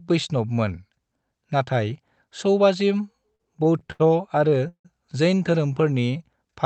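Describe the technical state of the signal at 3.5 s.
At 3.5 s the signal sits inside a run of repeated stalls (stutter) lasting from 3.35 to 4.02 s. Packets were arriving late, so the jitter buffer ran dry six times, and each time the receiver stretched the last sound to cover the wait, the longest hold being 79 ms. About 163 ms, roughly a quarter of that span, is filled-in sound. Nothing is lost, but the speech drags and stutters through this stretch.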